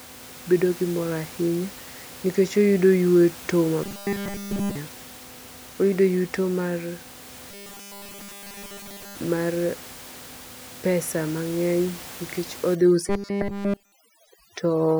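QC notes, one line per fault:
3.84–4.76 s, 7.51–9.15 s and 13.08–13.92 s, robotic sound from repeated short buffers: the speech becomes a rigid metallic buzz at 200 Hz, which matches a 5 ms segment looping with essentially no fresh audio getting through. The likely cause is audio arriving too late for playback.
12.75 s to end, overdone noise removal: noise reduction set too aggressively strips quiet bands along with the room noise, which otherwise sits about 19 dB below the speech. The background drops and breaks up into twinkling specks, overlapping the final buzz.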